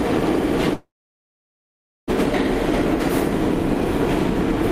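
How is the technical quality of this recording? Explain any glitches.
The recording has one clear glitch. From 0.73 s to 2.12 s the sound cuts out. There's a brief fading buzz where the last bit of audio gets stretched, then roughly 1.2 s of plain silence. When it resumes at 2.12 s, about 0.76 s of material is simply gone and the timing has shifted by around half a second. That's most likely a long network dropout: packets stopped arriving, the receiver padded the gap, and playback picked up further along.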